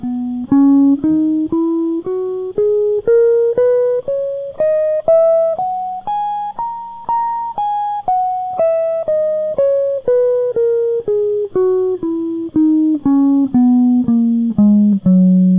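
Nothing to flag: the music runs without any audible dropout, glitch or transport fault from beginning to end.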